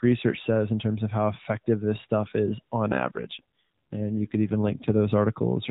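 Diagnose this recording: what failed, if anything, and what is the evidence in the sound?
An AMR rate drop hits at the network stage. After "this stuff is on", from 2.92 s to 4.99 s, the speech turns buzzier and more synthetic. The band holds, with no gap. That fits a weak link pushing the codec from 12.2 to 5.9 kbps.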